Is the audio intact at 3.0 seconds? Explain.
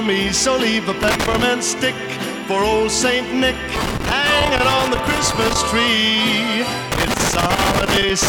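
Yes, the audio is intact at 3.0 seconds, with no dropout, click or other fault at that point.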